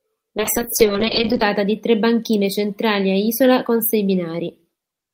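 From 0.38 s to 1.49 s the speech turns rough and watery, with the upper frequencies muffled away. This is a call bitrate drop: the encoder was pushed down from roughly 40 kbps to a level that sounds like about 6 kbps for about a second, coding far more coarsely.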